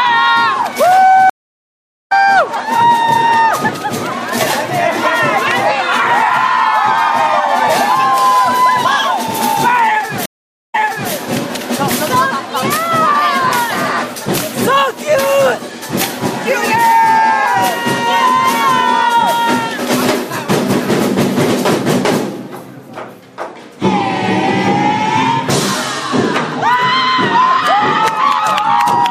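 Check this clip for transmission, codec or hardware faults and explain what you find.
Two stream reconnects are audible, at 1.30 to 2.12 s and at 10.26 to 11.13 s. In each, the connection dropped, playback went silent, and a fresh decoder picked up mid-stream, muting or fading in its first frame or so. The first gap lasts 810 ms and the audio resumes roughly half a second further on, skipping material. The second gap lasts 479 ms and resumes 392 ms earlier, repeating a short stretch as the server resent buffered data.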